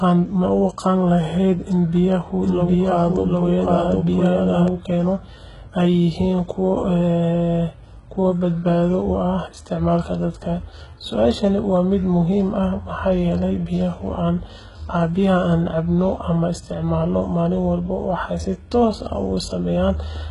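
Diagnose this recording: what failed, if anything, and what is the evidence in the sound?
HE-AAC compression runs throughout, at the codec stage. Nothing reaches above 11.1 kHz, and the coding damage is heavy, which points to a very low bitrate near 12 kbps. The likely cause is spectral band replication copying lower bands upward, so the treble is reconstructed rather than original.

A doubled audio track appears from 2.40 to 4.68 s. A second full-band copy, roughly as loud as the original, trails it by about 0.7 s and starts and stops abruptly. This likely comes from the same audio being captured again through a slower path or from an edit holding two copies out of step.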